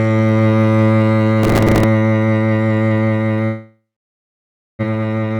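Music plays, and at 1.43 s a processor overload crackle begins. It runs to 1.84 s. The processor misses its deadline for one small buffer after another. The pattern points to buffers of about 3 ms and around thirty misses in a row. Each miss repeats a scrap of old audio with hard edges. Together they form a gritty, tearing crackle over the music. It stops when the load eases.

At 3.45 s the music breaks off, and the gap lasts until 4.85 s. This is most likely a long network dropout, where no packets arrived for a long stretch. The receiver stretches the last sound into a fading buzz. Then nearly a second of silence follows. When the music returns, a little under a second of it is gone. The delay also shifts by roughly half a second.

Right after, at 4.89 s, a jitter buffer speed-up starts. It lasts until 5.38 s. The receiver holds more audio than it aims for. To drain it, the receiver cuts many tiny pieces, each a pitch period or a few long. 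In all it removes about 0.15 s. The music runs at 132 percent speed, with the pitch unchanged. It sounds hurried, and the tempo lurches forward.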